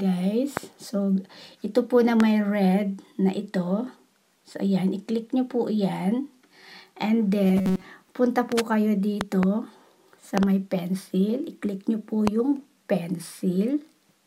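A loud pop hits at 0.57 s and another at 2.20 s. Each is a sharp click, about 15 dB above the sound, which carries on beneath it. A sudden voltage pulse, likely from a switch, plug or static discharge, was added to the signal.

From 7.44 to 7.85 s the sound turns into a rigid metallic buzz at 188 Hz. This is robotic sound from repeated short buffers. About 5.3 ms of audio is looped while most of the real signal is skipped, likely because new data arrived too late.

More pops follow. Two come in quick succession between 9.21 and 9.45 s, and another pair falls between 10.38 and 10.45 s. A single pop lands at 12.27 s. All are similarly loud, sharp thumps on top of the sound.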